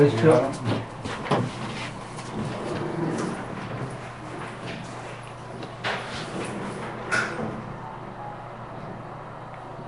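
Throughout, the audio carries a rough, hissy halo and a smeared, underwater quality, likely from Nellymoser compression, consistent with roughly 44 kbps. Starved bands are refilled with noise. A spectrogram shows grainy, blocky patches and nothing above 10.6 kHz.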